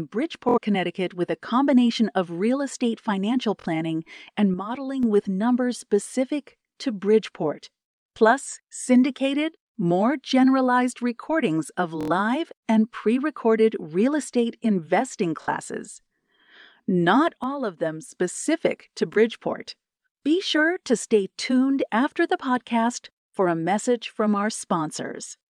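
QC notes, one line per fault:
0.49–0.58, 3.60–3.66, 6.04–6.08, 12.01–12.11 (after "more generalized recordings of"), 15.42–15.48 (after "recorded real estate investing"), 19.14–19.18 s: Bluetooth stutter. Late or lost packets make the receiver replay its last short slice, which fits roughly 23 ms packets. This produces a buzzy repeat, and the speech then resumes further on.
4.54–5.03 s (just before "with numbers") and 17.44–18.13 s: one channel drops out. The level abruptly falls by about 6 dB, with a likely cause of one stereo channel vanishing before the mono sum.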